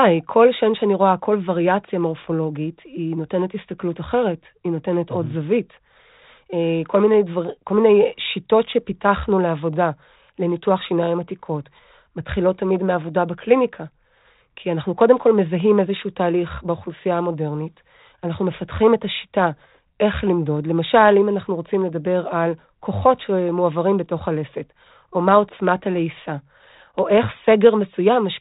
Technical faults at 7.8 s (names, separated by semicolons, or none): none